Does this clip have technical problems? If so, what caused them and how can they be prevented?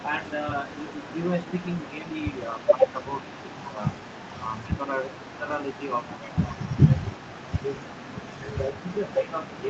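Yes. An echo leak runs from 0.0 to 9.6 s. A faint delayed copy of the speech trails it by about half a second, roughly 20 dB down. The far end's echo canceller likely let loudspeaker pickup through. A headset or better echo cancellation there would prevent it.

Speech suppressed in double talk appears from 2.0 to 5.45 s, in pieces totalling under a second, and from 6.93 to 9.69 s. The speech dips by up to around 10 dB. The canceller likely ducked it while both sides talked. Headsets on both ends would avoid this.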